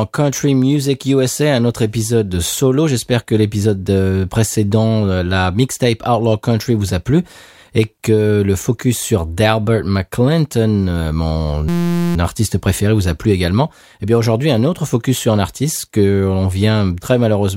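At 11.69 s a system hang loop kicks in and runs until 12.16 s. The machine froze while the audio hardware kept replaying one tiny 5.8 ms slice, which fits a 256-sample buffer, so you get a steady buzz at about 172 Hz.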